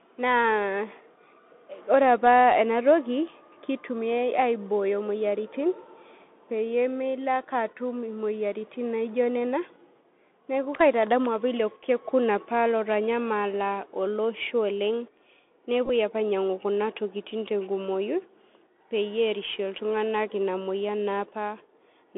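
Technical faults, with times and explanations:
Throughout: Bluetooth CVSD headset codec, a one-bit adaptive-step coder consistent with 64 kbps, limits the band to 200 Hz to 3.5 kHz. The spectrogram is empty above 3.5 kHz, with a grainy hiss floor and scratchy sibilants.
15.86 to 15.90 s: Bluetooth headset packet repeated. About 34 ms of audio is lost across 45 ms and refilled with repeats every 3.75 ms, giving a brief buzz near 267 Hz. The waveform shows identical short cycles, the longest run about 15 ms.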